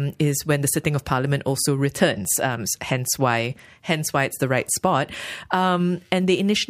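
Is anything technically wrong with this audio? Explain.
Yes. A block size mismatch (truncated) runs through the whole clip. One stage hands over longer blocks than the next stage takes in, and the tail of each block is dropped. The seams make a steady buzz at 43.1 Hz, which fits 1024-sample blocks, while the speech keeps its normal speed and pitch. A spectrogram shows thin vertical stripes about 23 ms apart, and the waveform shows regular jumps at each block boundary.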